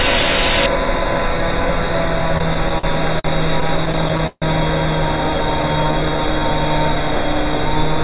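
From 0.66 s to the end, channel delay (comb filtering) gives the sound a hollow, phasey colour. One channel lags the other by only a fraction of a millisecond, so summing them to mono cancels a notch around 3 kHz. On a spectrogram this shows as a steady dark horizontal band, just under the 4 kHz ceiling of the narrowband call path.

Between 2.2 and 4.44 s the audio keeps catching and dragging in repeated stalls (stutter). Packets arrived late, so the jitter buffer ran dry over and over. Each time, the receiver stretched the last sound to cover the wait, adding about 0.39 s in total, with the longest hold lasting 150 ms. Nothing is lost. On the waveform the repeated segments look like copies of the preceding cycles, and the longer ones fade in level.

From 5.30 to 6.40 s a jitter buffer slow-down plays the sound at about 89% speed with its pitch unchanged. Repeated single pitch periods add 121 ms to rebuild the buffer's reserve. 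On a spectrogram, events appear horizontally stretched while their frequencies stay where they were, and a slight warble may appear.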